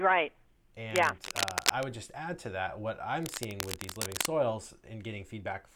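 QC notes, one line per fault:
0.91–1.86 s and 3.23–4.26 s: cable scratch noise. Dense, irregular crackling and rustling overlays the speech, ending just before "just add to that", then returning after "add to that what". The first burst is about as loud as the speech, the second somewhat quieter. Likely a worn connector being moved, making its contact resistance fluctuate rapidly.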